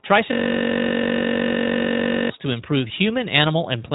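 Throughout, the speech carries iLBC codec damage. Nothing above about 3.8 kHz passes, so the sound is dull and boxy. Each 20 ms frame is coded on its own. The speech comes out plainly rough and synthetic, which fits the 15.2 kbps mode.

From 0.33 s to 2.30 s, a system hang loop takes over. The system froze while the audio hardware kept replaying one buffer. A 21.33 ms slice repeats about ninety times. At 46.9 Hz, it sounds like a steady buzz, which fits a 1024-sample buffer.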